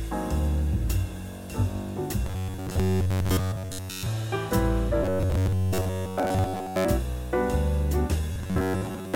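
From 2.26 to 4.07 s, 5.04 to 6.85 s and 8.33 s to the end, the sound turns robotic. It becomes a rigid, metallic buzz fixed at about 93.8 Hz. This is robotic sound from repeated short buffers. Fresh audio likely arrived too seldom, so playback looped a slice of roughly 10.7 ms, and most of the real audio was skipped. That loop length sets the buzz pitch. The sound's rough outline still comes through.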